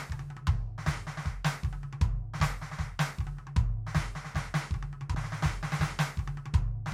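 Music clip with a brief jump at 5.14 s where roughly 50 ms of audio vanishes: compressed frames skipped, a couple of missing or rejected frames.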